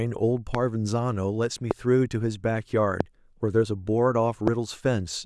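At 0.55–0.57 s, 1.71–1.73 s, 3.00–3.03 s and 4.47–4.50 s, a loud pop, each a single sharp thump about 15 to 20 dB above the speech, likely from a voltage spike. The speech continues unbroken underneath, which sets it apart from a dropout click.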